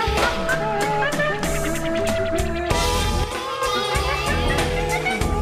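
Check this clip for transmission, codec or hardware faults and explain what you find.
One fault is present. From 3.24 to 3.62 s the level falls abruptly by about 6 dB, then snaps back. The cause is likely one channel drops out: with one stereo channel gone, the mono sum keeps only half of what both shared. Unlike a simple gain dip, anything carried only in the lost channel disappears completely instead of just getting quieter.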